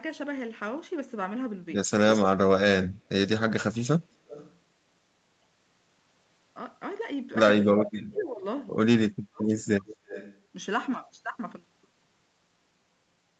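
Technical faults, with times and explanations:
4.28 to 4.56 s, 7.86 to 7.91 s and 9.86 to 10.4 s: echo leak. A faint delayed copy of the speech comes back, about 0.25 to 0.29 s late and about 15 to 20 dB below it. A far-end echo canceller likely let loudspeaker sound through its microphone.
7.61 to 8.44 s, 8.98 to 9.53 s and 9.73 to 10.1 s: speech suppressed in double talk. The speech dips sharply while the other side talks, by up to about 40 dB. The echo canceller likely mistook it for echo and turned it down with the echo.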